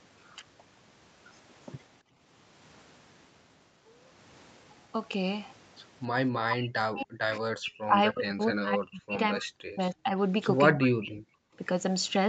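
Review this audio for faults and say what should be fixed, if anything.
The echo canceller gated the background while the loudspeaker was active, pulling the microphone down hard from 2.02 to 2.15 s (about 14 dB) and from 11.52 to 11.56 s (about 9 dB), so the room sound briefly dips and then returns. Prevent it by using gentler, slower-releasing suppression that leaves comfort noise in place of hard gating.

The speech itself is heavily cut from 6.43 to 9.18 s, 9.36 to 10.15 s and 10.73 to 11.22 s, dropping by about 40 dB in pieces. This is likely double-talk suppression, where the canceller mistook the talker for loudspeaker echo and muted both. Prevent it by improving double-talk detection so near-end speech is kept while the far end is speaking.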